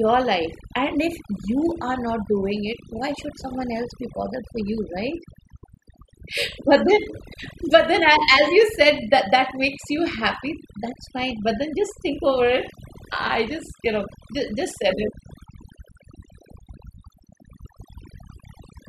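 Overdone noise removal runs through the whole recording: a noise reduction stage set far too aggressively cuts individual frequency bands that sit near its noise estimate, taking quiet parts of the speech with them. Pauses collapse into near silence flecked with twinkling specks.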